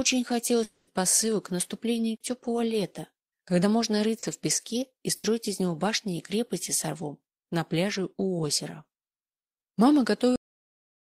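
Around 0.63 to 0.94 s the sound smears into a held, fading continuation for roughly a quarter second, then jumps ahead; a long network dropout is the likely cause. At 4.19 to 4.26 s there's a short concealed packet loss: about 40 ms went missing and got patched over, so you hear a brief smear. From 5.16 to 5.27 s comes a burst of packet loss, about 80 ms gone, with the last sound stretched and fading before it picks up further on. Then a cut-off end at 10.36 s, where it stops mid-sound and drops straight to silence with no decay.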